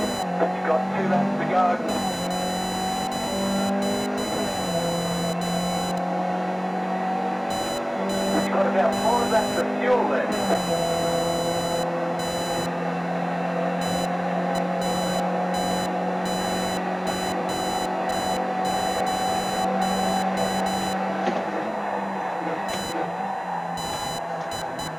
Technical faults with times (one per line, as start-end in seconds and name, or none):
0.00-24.98 computer activity noise